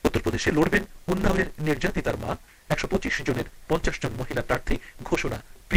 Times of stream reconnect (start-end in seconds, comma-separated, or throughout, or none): none